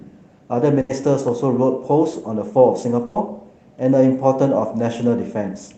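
A speech clip with two bursts of packet loss, at 0.81–0.91 s and 3.05–3.17 s. In each, about 80 and 100 ms of audio was lost and concealed by stretching the preceding sound, which fades as a held buzz or hiss. On a spectrogram this shows as smeared horizontal bands before speech resumes abruptly further along.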